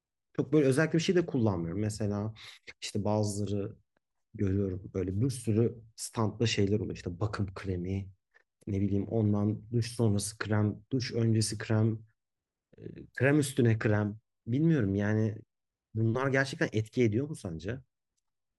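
There are no technical faults in this speech recording to describe.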